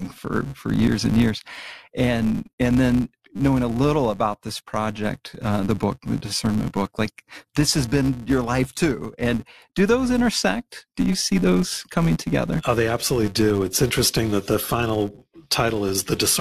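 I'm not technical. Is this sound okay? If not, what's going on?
No. A processing filter in the chain forgets what it was doing at the end of each small chunk of audio and restarts from scratch. That is a filter restarted on every block, and it leaves a steady buzz at about 200 Hz under the whole recording, getting louder when the speech does.

Separately, a bit of the compressed data got damaged, and the player replaced it with silence. This corrupt frame muted problem causes a sudden brief gap from 2.56 to 2.59 s, right before "and then knowing a". It sounds like roughly two chunks dropped out.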